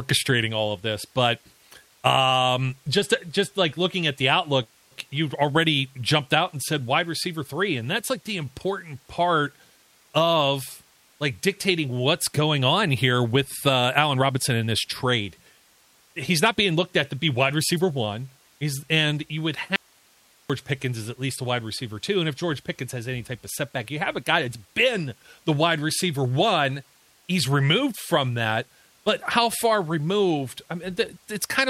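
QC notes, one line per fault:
4.63–4.93 s, call audio freeze: delayed packets likely left the jitter buffer empty, so the last sound is stretched into a fading buzz or hiss that drops to about 220 ms of silence. Speech then resumes where it stopped, with nothing lost and the delay now 276 ms longer.
10.86–13.28 s and 13.78–15.27 s, jitter buffer speed-up: with too much audio queued, the receiver trims short pitch-period pieces again and again, removing around 150 ms and then around 100 ms. Speech runs at 106% speed at an unchanged pitch and sounds hurried.
19.76–20.50 s, audio dropout to a faint residue: the wanted signal likely vanished while the path after the break stayed live. Speech cuts off abruptly for 738 ms, leaving only hiss roughly 35 dB below the speech, and then returns just as suddenly, unlike a pause or fade.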